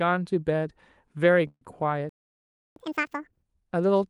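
Call audio freeze, 1.47 to 1.64 s: the sound smears into a fading buzz for about 139 ms, ending in roughly 40 ms of silence, then resumes where it stopped with nothing lost. The likely cause is packets delayed in transit, draining the jitter buffer while the receiver stretched the last sound.

Playback stall, 2.09 to 2.76 s: the audio cuts out mid-flow for 669 ms, a clearly audible hole. The player likely ran out of data or had its output thread blocked, so nothing reached the output until it recovered.

Catch-up at higher speed, 2.76 to 3.43 s: right after the stall the sound plays at double speed, jumping up about ten semitones, then settles back to normal pitch and pace. The player is resampling its backlog faster to recover the time lost during the silence.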